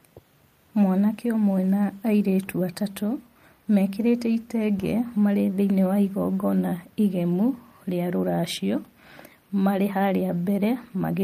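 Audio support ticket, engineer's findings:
No technical faults found.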